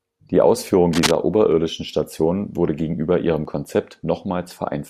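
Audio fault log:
0.93–1.11 s, cable scratch noise: dense, uneven rustling roughly as loud as the speech, likely a worn contact being moved; unlike hiss, it comes in ragged bursts.
1.52 s and 3.45 s, underrun with held sample: the waveform freezes flat for 0.43 ms and 1.07 ms. A sliver of live audio is lost each time, about 0.4 ms and 1.0 ms.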